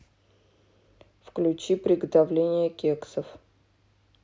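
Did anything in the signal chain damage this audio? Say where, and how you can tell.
No, nothing in the signal chain stood out as damaging this speech on listening.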